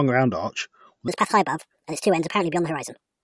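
Speech, and from 1.08 s to the end at 3.24 s, right after "round arch with", the audio has a wrong sample rate fault. Everything runs 1.5 times too fast and about 7 semitones too high, so the sound turns chipmunk-like and rushed. This fits 16 kHz material played back at 24 kHz without conversion. On a spectrogram, harmonics and formants jump upward by half again at 1.08 s, and the band ceiling rises from 8 kHz to 12 kHz. The waveform's syllable envelopes become visibly compressed in time.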